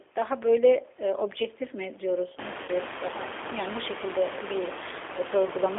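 Throughout, the speech carries G.729 codec damage: an 8 kbit/s model-based rebuild, band-limited to roughly 300 Hz–3.5 kHz, giving plainly rough, synthetic texture. From 2.63 to 2.71 s, VoIP packet loss concealed by the speech codec stretches the last sound into a fading buzzy tone or coloured noise, consistent with about 50 ms of lost frames. The room noise that rises about 23 dB around 2.5 s also warbles through the codec.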